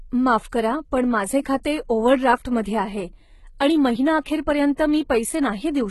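HE-AAC compression, throughout the speech: nothing reaches above 11.8 kHz, and the treble is heavily damaged. It sounds rebuilt from copied lower bands rather than coded, so its harmonics fail to line up and s sounds turn gritty and lispy, likely from a low bitrate around 16 kbps.

Pre-echo at 1.63 s, just after "पण माझे" and before "ओव्हरड्राफ्टमध्ये आहे आणि महिना", and again from 4.76 to 4.78 s: a brief hiss of 16 ms and then 20 ms leads each attack. Coding noise sized for the loud onset spilled into the quiet moment before it, leaving that attack smeared and soft.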